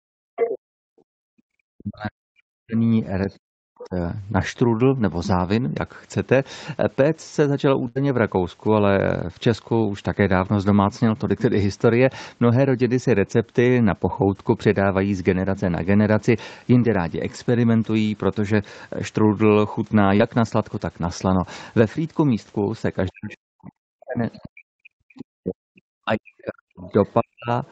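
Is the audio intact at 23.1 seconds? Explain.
No. Right around there, from 23.08 to 23.34 s, the other side's voice leaking through shows up: a faint second voice, roughly 30 dB under the talker. That's likely the far end playing out of the talker's loudspeaker and getting picked up again by the mic, with the echo canceller not scrubbing all of it out before the signal went on.

Just after it starts, at 23.12 s, you also get speech suppressed in double talk, running all the way to 27.51 s. The talker's voice keeps sinking, at its worst by something like 40 dB, for about four seconds in total. Both sides were likely talking at once, and the echo canceller, unable to tell its own talker from the returning echo, turned everything down together.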